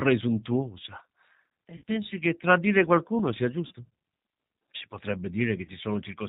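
Throughout, the speech carries G.729 codec damage, plainly audible as a rough, slightly synthetic edge. At 8 kbit/s the coder rebuilds each 10 ms frame from a vocal-tract filter, a pitch predictor and a few pulses rather than the real waveform. Nothing reaches above 4 kHz, so a spectrogram shows a hard ceiling at that height. The harmonics look smeared and grainy, with a buzzy texture in the voiced stretches.

At 1.77 to 1.83 s, just before "pensi che tradire qualcuno", VoIP packet loss concealed by the speech codec replaces about 50 ms of sound, which fits five lost frames. The decoder extends its last pitch and filter at falling gain, so the sound is stretched out and fades. Two shorter losses follow: 3.67 to 3.72 s, right after "che tradire qualcuno sia", about 40 ms (four frames), and 5.65 to 5.71 s, about 30 ms (three frames). On a spectrogram each loss appears as a stretched, smeared patch that dims toward the end. 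The waveform shows a tapering, overly regular stretch where the speech should be, followed by a weak, distorted recovery.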